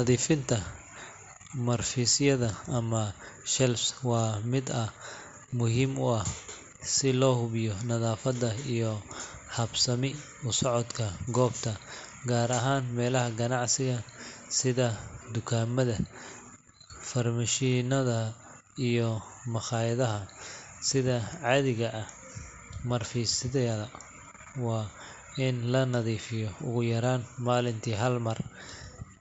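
Speech over a Bluetooth headset shows concealed Bluetooth headset packet loss at 4.18, 5.51, 17.71, 19.08 (before "maqayadaha sidha cadiga ah") and 24.03 s (before "wa in"). Each gap of 7.5 or 15 ms, which fits one or two lost packets, is filled by repeating recent waveform, so each is a brief blip, the single-packet ones nearly hidden. The mSBC wideband link adds a light graininess.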